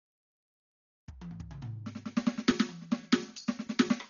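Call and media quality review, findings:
Music dull, band-limited throughout; rough, fluttering noise around tones, heavy codec damage. Likely Dolby Digital compression, bitrate consistent with 40 kbps: band narrowed, many frequency lines given no mantissa bits, decoder filling with dither noise.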